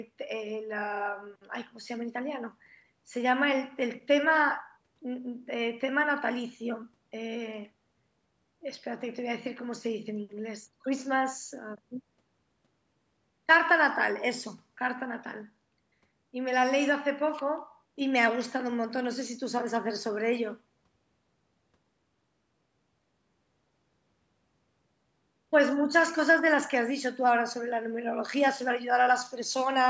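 There are no technical faults to describe in this speech, which carries the normal call microphone processing with nothing above 8 kHz.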